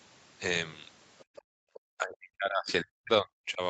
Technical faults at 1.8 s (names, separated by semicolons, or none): background gated by the echo canceller; other side's voice leaking through